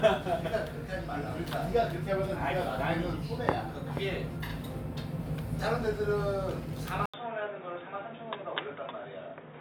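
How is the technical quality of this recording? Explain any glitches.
The recording has one clear glitch near the end. An input switch to a poorer device happens at 7.06 s and lasts to the end of the clip. After a gap of about 80 ms, the band is cut off at 3.8 kHz, the level drops by a few decibels, and a faint new noise floor appears well below the sound. The likely cause is the system changing mid-recording to a narrower-band microphone or headset, so the sound turns abruptly dull and boxy.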